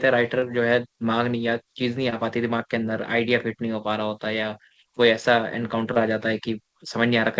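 Three short concealed packet losses occur, at 0.40 to 0.44 s, 2.10 to 2.14 s and 5.94 to 5.98 s. Each time, about 20 ms of the call arrived too late to decode. The receiver filled the gap by extending the preceding sound and then blended back into the real signal. Each one is heard as a brief smear or wobble. The call path itself passes nothing above 8 kHz, which fits a wideband codec such as G.722.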